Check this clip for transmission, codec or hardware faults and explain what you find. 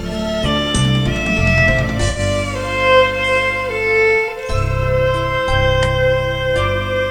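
Two faults are present: grainy quantisation distortion across the whole clip, and one brief concealed gap.

Low bit depth without dither, throughout: error noise sits roughly 35 dB below the signal and tracks it, so quiet passages turn gritty rather than hissing steadily. That signal-following grain, unlike dithered noise, likely comes from rounding to about 8 bits.

AAC frame loss with concealment, 2.10 to 2.19 s: roughly 64 ms of audio, which fits three lost frames, was rebuilt by the decoder from the last good spectrum. It sounds like a smeared, noisy or phasey patch rather than a silent dropout or a click.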